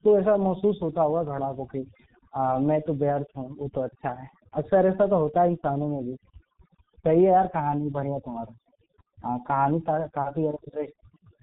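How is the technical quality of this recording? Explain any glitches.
The recording is poor throughout, with two faults running from start to finish.

Across the whole clip the background drops and is broken by twinkling, chirpy specks. This is overdone noise removal: the reduction was set so strong that frequency bands near its noise estimate are pulled down or shut off, taking quieter parts of the voice with them.

Also throughout, the speech is muffled and hoarse, consonants smear together, and nothing is heard above about 3.8 kHz. That points to the G.723.1 codec at around 6.3 kbit/s. Its very low bitrate and slowly updated voice model cause heavy damage, blurring fine detail and stripping the high end.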